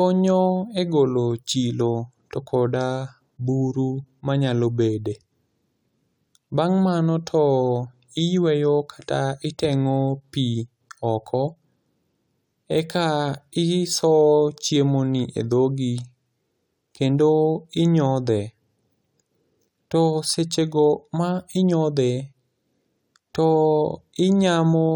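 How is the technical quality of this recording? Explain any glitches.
No glitches or technical faults can be heard here.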